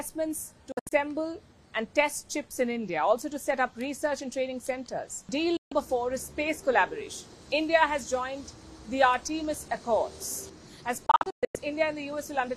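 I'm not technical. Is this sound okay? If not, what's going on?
No. The sound cuts out three times: briefly at 0.72 s and again at 5.57 s, each losing about a seventh of a second in total, then more badly from 11.06 to 11.55 s, where it drops in several short holes. This is a digital broadcast dropout: the receiver stopped getting clean data, so it switched the sound off almost instantly until good data arrived again. Whatever played during those gaps is simply missing.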